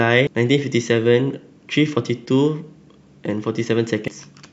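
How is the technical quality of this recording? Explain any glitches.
The speech has two glitches. At 0.27 s and 4.08 s, damaged data in a compressed stream makes the decoder lose sync. Each produces a brief glitch.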